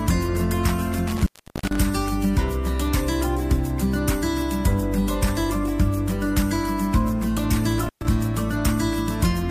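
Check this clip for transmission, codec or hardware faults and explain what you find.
Two dropouts from an intermittent contact, at 1.07 to 1.83 s and 7.83 to 8.06 s. A loose plug or cable conductor briefly loses its connection, so the signal path opens. The first time the line stays open for about 0.37 s, the second for about 0.12 s. Each break begins and ends with a scratchy crackle as the contact makes and breaks, and while the line is open the sound drops out and only a faint hiss remains.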